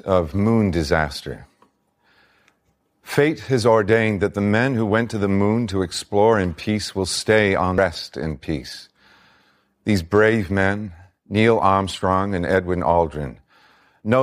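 Speech, with one fault at 7.78 s, between "peace will stay on" and "in peace": damaged data in a compressed stream. Corrupted data makes the decoder misread a frame and lose sync until it finds the next frame header, giving a brief chirp, squawk, click or short hole.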